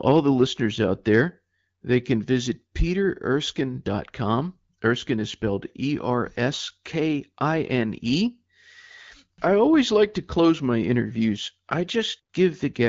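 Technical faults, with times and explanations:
No technical faults; the speech carries the light coding character of an AMR wideband (HD Voice) path, consistent with a rate of about 12.65 kbit/s, with the band above 6.4 kHz filled by shaped noise.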